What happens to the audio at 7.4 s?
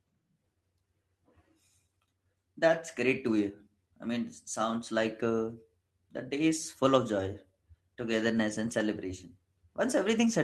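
At 7.4 s you're in the middle of repeated timing corrections running from 0.38 to 10.27 s. The receiver keeps trimming short slices to keep pace, so the speech plays at about 104% speed, with small, uneven hiccups. Underneath that is clock drift between sender and receiver: the sender's clock runs roughly 4 percent fast, so the jitter buffer keeps overfilling and forcing those cuts.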